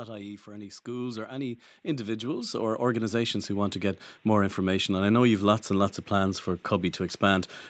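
Automatic gain rising runs from 0.47 to 4.11 s: the gain control judged the speech input too quiet and turned its gain up by about 16 dB over those seconds, so voice and background noise swell together. The top end stops at 8 kHz throughout.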